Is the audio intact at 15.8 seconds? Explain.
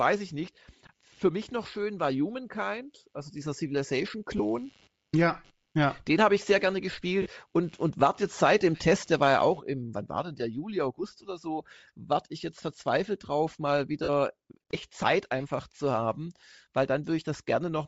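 No. At 15.8 s, as throughout, the speech carries a grainy, breathy upper band, likely from Bluetooth LC3 compression, noise-filling discarded highs at what sounds like a low bitrate.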